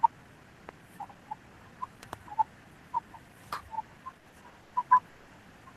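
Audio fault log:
0.7 s: loud pop, a single sharp pulse about 10 dB above the sound, likely from a switch or static spike; the audio continues underneath.
2.03–2.15 s: loud pop, two sharp pulses in quick succession about 15 dB above the sound, likely an electrical glitch, shaped into a double thump.
4.18–4.73 s: repeated stalls (stutter), four short waits up to 90 ms where late packets emptied the buffer; the last sound was stretched, so the audio drags without losing anything.
5.09–5.28 s: call audio freeze, a single 180 ms hold where the last sound continues as a fading buzz, likely from delayed packets; the audio then resumes where it stopped.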